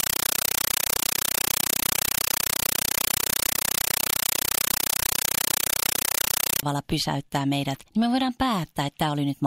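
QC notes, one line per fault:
0.0–6.63 s: compressed stream played as audio. Loud chattering static replaces the speech, with 8 ms noise bursts repeating 31.25 times a second, which fits an undecoded 384 kbps AC-3 stream.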